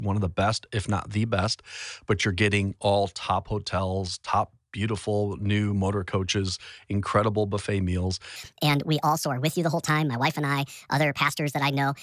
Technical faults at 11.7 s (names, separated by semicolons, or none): wrong sample rate